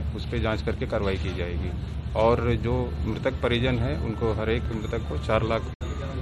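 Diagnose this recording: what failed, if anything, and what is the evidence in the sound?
The digital broadcast receiver failed its checksum or lost signal and muted until valid frames returned. The sound fades out over roughly 8 ms at 5.74 s and returns at 5.82 s, leaving a hole that fits about 64 ms of missing frames.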